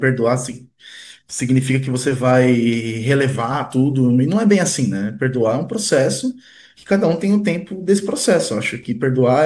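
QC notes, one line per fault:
No faults detected in this clip.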